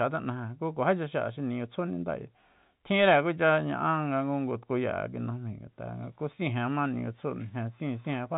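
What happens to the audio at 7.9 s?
Nothing goes wrong at 7.9 s: the speech carries on intact through the call path, with the band limit of about 4 kHz that suggests a narrowband G.711 A-law codec at 64 kbps.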